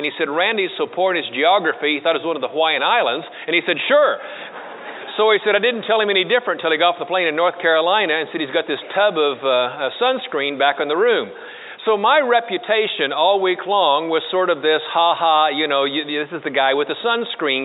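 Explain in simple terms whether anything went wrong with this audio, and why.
Nothing went wrong; no faults can be heard.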